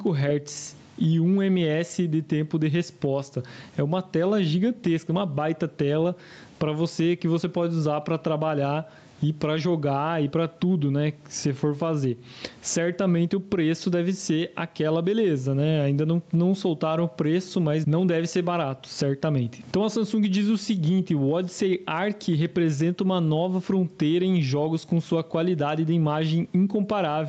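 Throughout, gain pumping: the gain is likely set far too high, so a fast limiter pulls it down about 15 dB on loud sounds.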